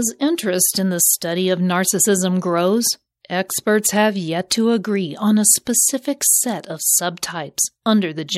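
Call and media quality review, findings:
Pre-echo ahead of attacks, three events: 3.48 s (after "study of narcissism grows"), 4.50 s (after "have yet"), 5.65 s (after "to agree on a"). Brief hiss of 12, 11 and 16 ms before each onset, about 11, 15 and 11 dB above the surrounding floor; onsets soft, smeared. Component: transform codec. Mechanism: quantisation noise spread across a whole block fits a 26 ms window with no switch to short blocks. Spectrogram: broadband smear just left of each onset. Waveform: low fuzz before the transient.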